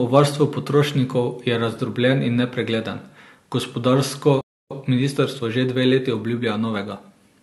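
At 4.41 s, right after "razdrobljen in nepregleden gospodarsko", the speech cuts out mid-flow and stays silent for about 0.29 s until 4.71 s. This playback stall likely happened because the player ran short of buffered data or its thread was briefly blocked.

From 4.71 s to 7.31 s the speech sounds hurried, running about 1.1 times faster at unchanged pitch. This is time-compressed catch-up: the player trims small slices of audio and cross-fades the joins to clear the backlog left by the stall.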